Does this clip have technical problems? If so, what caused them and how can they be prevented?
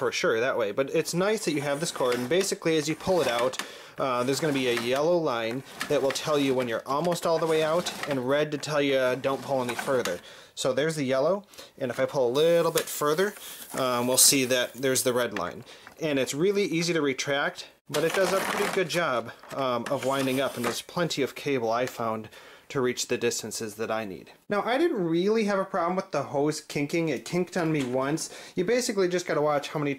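Yes. From 12.35 to 15.23 s there is pre-emphasis left on: the treble is raised about 13 dB at 10 kHz relative to 1 kHz, making the sound thin and sibilant. The boost climbs steadily from around 2 kHz, which fits the 75 µs FM curve. A broad EQ shelf would not rise this way. To prevent it, apply the matching de-emphasis wherever pre-emphasised material enters the chain.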